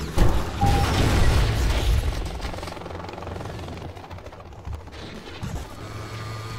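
From 0.25 s to 6.25 s, periodic USB or driver dropouts recur every 0.5 s: about fifteen tiny gaps, each around half a millisecond, filled with silence. They tick like a metronome, unlike random crackle, and vanish whenever the sound itself pauses.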